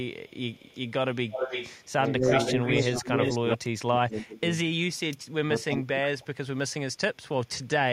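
It's a speech clip with a couple of call-path problems. From 0.26 to 3.57 s there's echo leak: a copy of the voice comes back 318 ms late, only about 5 dB under the speech, so two voices overlap. It returns from 7.48 to 7.68 s, much lower at about 30 dB down. That's likely a loudspeaker-side echo canceller letting some of its mic pickup through. There's also speech suppressed in double talk, from 2.09 to 4.49 s with dips reaching about 30 dB over roughly 1.5 s in total, and again from 5.32 to 7.07 s, about 25 dB deep, also roughly 1.5 s. The likely cause is that canceller failing to tell its own talker from the loudspeaker echo while both were active, and pulling both down.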